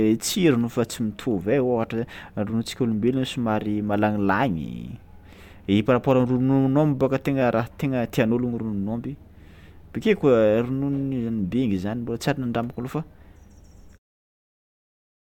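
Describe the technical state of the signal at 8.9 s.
At 8.9 s the speech signal is intact, with no technical fault present at that moment.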